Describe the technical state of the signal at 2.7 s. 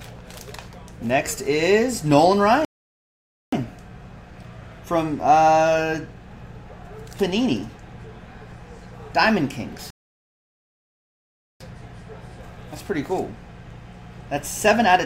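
At 2.7 s the signal sits inside a playback stall, most likely the player running short of data or its thread being blocked, so output halts from 2.65 to 3.53 s. The sound drops out mid-flow for about 0.88 s, then resumes.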